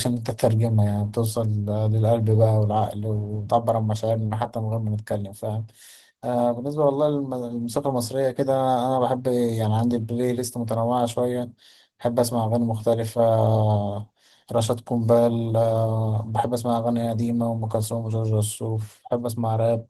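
From start to finish the speech carries Opus voice compression, and it's plainly audible. The codec seems to be running in its hybrid mode, with the linear-prediction SILK layer handling everything below 8 kHz and a CELT layer filling in the top of a fullband signal. At a rate that sounds like roughly 16 kbps, the excitation is coded coarsely, so the voice comes across hoarse and faintly robotic.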